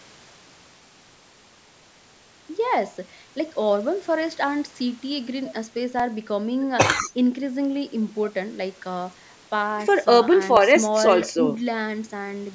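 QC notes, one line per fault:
5.99 s and 10.57 s, dropped samples: a tiny stretch of the stream, likely around a millisecond's worth of samples, went missing at each point, so the waveform leaps straight from one value to a later one with nothing in between. That abrupt step is heard as a single sharp click at each time, showing as a thin vertical line through the spectrum, while no audible sound is actually lost.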